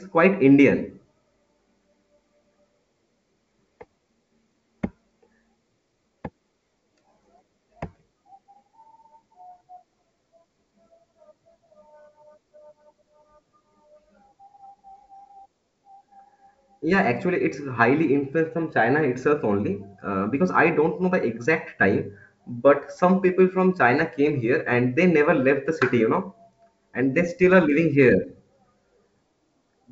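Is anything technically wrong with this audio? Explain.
No, nothing stood out on listening to this speech, which comes through as ordinary 64 kbit/s G.722 wideband telephone audio.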